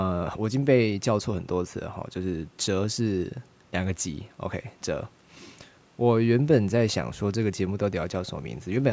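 No faults detected in this speech; the call microphone processing behaves as designed, with the lowest bass trimmed by its high-pass filter and nothing above 8 kHz.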